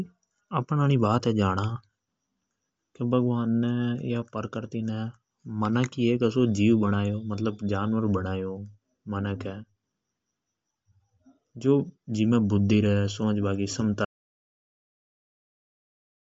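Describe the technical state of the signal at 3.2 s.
At 3.2 s the speech carries audible Bluetooth LC3 compression, present across the whole clip. Nothing sounds above about 7.7 kHz. The top band has a breathy, grainy edge where noise fills the emptied spectrum. The cause is likely a low-bitrate LC3 link, around 32 kbps with 10 ms frames.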